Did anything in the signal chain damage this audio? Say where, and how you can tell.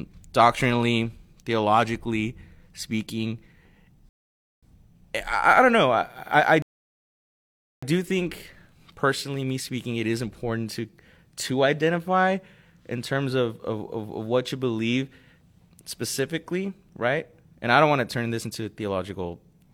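Yes, at playback: two rebuffering stalls interrupt this speech, with silence from 4.09 to 4.63 s and from 6.62 to 7.83 s, adding 0.54 s and 1.2 s. The player ran out of downloaded audio and paused. Unlike a dropout, speech resumes exactly where it stopped, so nothing is skipped.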